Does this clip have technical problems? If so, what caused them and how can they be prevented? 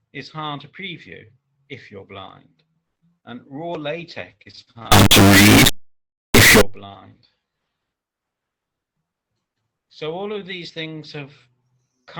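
Yes. From 4.92 to 6.61 s the audio becomes an extremely loud, buzzing square wave. This is integer read as float: 32-bit integer samples were interpreted as 32-bit floats, so values land near zero or far beyond full scale. Prevent it by declaring and checking the sample format at every interface.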